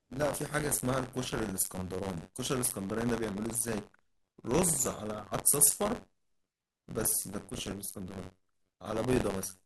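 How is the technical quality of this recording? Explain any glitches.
The recording has one persistent fault. Throughout, the speech carries a robotic buzz near 94 Hz. This is buffer tearing: writer and reader cross inside each period, splicing roughly a tenth of stale audio per buffer, which fits a 512-sample buffer.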